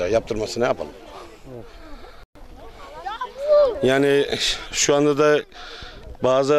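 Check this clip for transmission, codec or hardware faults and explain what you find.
One transmission fault is present: a digital broadcast dropout from 2.23 to 2.36 s. The sound abruptly cuts to silence for about 120 ms, then resumes further along, with that stretch simply gone. The receiver muted because incoming frames were missing or corrupted, which fits a handful of failed frames.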